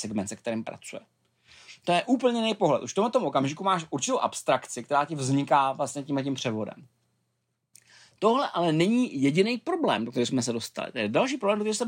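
No technical faults can be heard anywhere in the recording; the signal stays steady and intact throughout.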